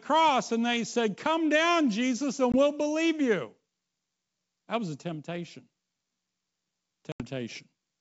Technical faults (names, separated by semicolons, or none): packet loss on an ADPCM call